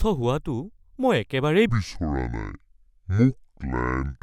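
From 1.69 s to the end at 4.23 s the speech falls into a section at the wrong speed, running at 0.61 times its proper rate and dropping about ten semitones, so it turns deep, slow and drawn out from one moment to the next. This likely comes from that stretch being played back against the wrong clock. Pitch and tempo sink together, which sets it apart from a pitch shift or time stretch, where only one of the two would change.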